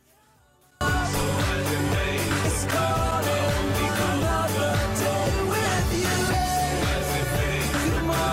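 One channel inverted, from 0.0 to 0.81 s: over this opening stretch the sound collapses by about 35 dB and then returns at its normal level. The likely cause is one side of a stereo source having reversed polarity, so when the two channels were summed to mono, everything they shared cancelled. What remains audible is only the small difference between them.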